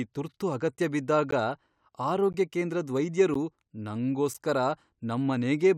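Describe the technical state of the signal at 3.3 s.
At 3.34 s there is a gap between stream segments. The time stamps of two consecutive chunks, which fits 1-second segments, don't meet, and the player pads the roughly 12 ms hole with silence. The speech drops out abruptly with hard edges, then resumes with nothing missing.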